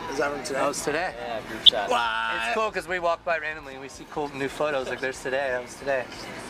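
From 1.59 to 1.69 s there is a short patch of DAB burbling. Bit errors from weak reception, at a low residual rate of about 0.07 percent, slipped past error correction and corrupted sub-band samples across what sounds like a few MP2 frames. The result is a brief few watery blips over the programme.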